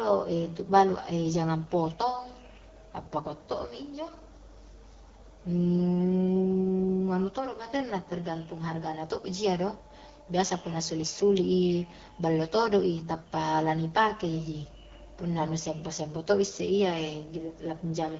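From start to finish the speech carries the AMR wideband (HD Voice) codec, at a roughness that points to one of its two lowest rates, around 8.85 kbit/s. The coder models the voice as pulses driving a vocal tract filter, and this few bits leaves voiced sounds raspy and grainy. On a spectrogram, harmonics stop near 6.4 kHz, with a featureless noise band up to 7 kHz and nothing above.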